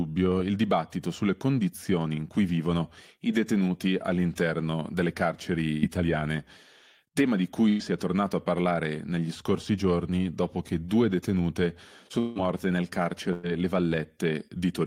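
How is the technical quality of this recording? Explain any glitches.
The speech is interrupted by repeated network glitches, each loss followed by a brief catch-up.

Burst of packet loss at 5.71–5.85, 7.69–7.83 and 13.33–13.49 s: roughly 0.1 s of concealed, fading buzz or hiss replaces 60 ms of lost sound. On a spectrogram it appears as smeared, decaying harmonics.

Long network dropout, likely the cause at 12.19–12.38 s: a buzz or hiss about 160 ms long fades while 120 ms of speech vanishes. The waveform shows a tapering plateau, then an abrupt restart.

Jitter buffer speed-up at 5.97–6.19 s (118%), 7.92–8.23 s (111%), 12.42–12.73 s (111%) and 14.56–14.81 s (113%): trimmed pitch periods make the speech briefly hurried but not higher. The spectrogram shows compressed timing with unchanged harmonic spacing.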